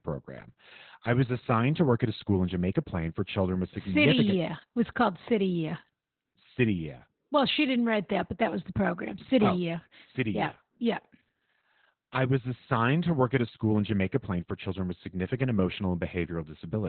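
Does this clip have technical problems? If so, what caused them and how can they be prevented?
Yes. Throughout, Opus voice compression at a rate fitting about 8 kbps has narrowed the band to nothing above 4.3 kHz, making the speech muffled, hoarse and slightly robotic. Raising the encoder bitrate so Opus keeps a wider band and finer coding would prevent it.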